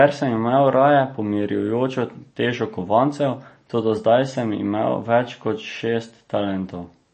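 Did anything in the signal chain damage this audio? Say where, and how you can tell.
Yes, likely MP3 compression at the codec stage, throughout: treble stops dead near 8.3 kHz, a flat spectrogram ceiling, and swirly, watery sibilants from zeroed lines flickering between frames, which fits a low bitrate around 32 kbps.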